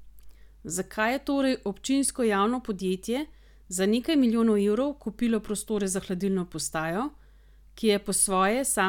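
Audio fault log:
No faults heard anywhere in this speech recording.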